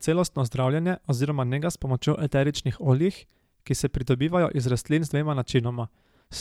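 Nothing goes wrong anywhere in this recording, so there's no technical fault to describe.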